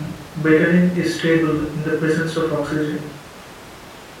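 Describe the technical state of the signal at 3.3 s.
At 3.3 s the speech signal is intact, with no audible technical fault at that moment.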